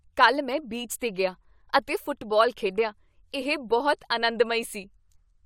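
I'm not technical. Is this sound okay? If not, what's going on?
Yes, this sound is okay; there's nothing going on with it that needs fixing.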